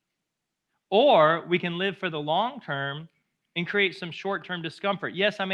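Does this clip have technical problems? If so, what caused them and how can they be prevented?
No, no technical problems here.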